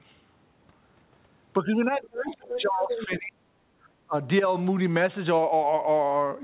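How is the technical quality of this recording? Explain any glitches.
The recording has clear glitches from a call where both sides talked at once. The audio is also narrowband, with nothing above 4 kHz, which fits a G.711 A-law call path at 64 kbps.

From 1.59 to 3.63 s the speech is pushed down hard, close to 40 dB at its deepest, for about two seconds. At 4.1 s there is a shorter dip of about 25 dB lasting roughly a tenth of a second. The talker's voice sinks and partly drops out. This is likely speech suppressed in double talk. The echo canceller could not tell the near talker from the far voice on the loudspeaker, so it turned everything down.

Inside that dip, a second voice breaks through three times: 2.27 to 2.34 s, 2.54 to 2.59 s, and 2.91 to 3.05 s. The first scrap is faint, about 15 dB under the speech. The later two are much closer, only about 5 dB below it. They are short fragments of the other side's voice leaking through. 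The canceller likely left residual loudspeaker echo in the microphone signal while it struggled with the overlap.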